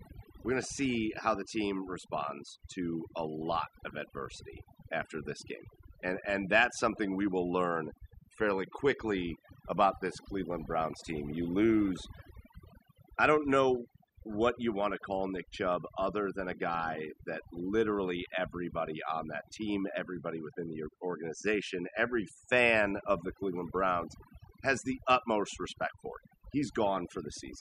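A speech recording with overdone noise removal throughout. The background drops and breaks up into twinkling specks. Quiet parts of the voice vanish.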